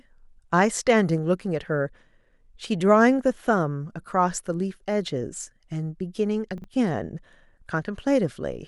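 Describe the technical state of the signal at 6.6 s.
At 6.58 to 6.64 s the signal has chunks out of order: one 20 ms chunk arrived two chunks late and plays after the two that should have followed it. Nothing is missing, but the speech briefly jumbles across three hard joins.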